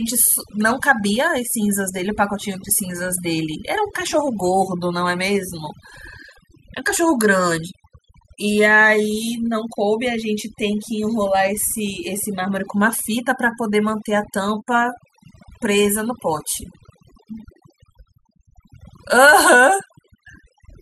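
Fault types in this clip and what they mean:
overdone noise removal: present throughout the speech, from start to finish. A noise reducer set far too aggressively is cutting individual frequency bands down or out whenever they sit close to what it judges to be noise, and it cannot tell quiet parts of the voice from hiss. The result is a background pulled down yet flecked with twinkling, chirpy specks, while the voice itself has its softer detail stripped away.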